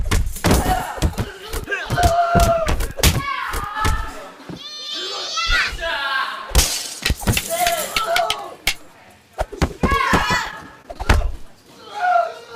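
From 10.45 to 11.00 s there is repeated packet loss, giving a robotic sound. Audio arrived late or not at all six times in about half a second. Each hole, the longest about 22 ms, was covered by extending the preceding sound. The stretch turns choppy.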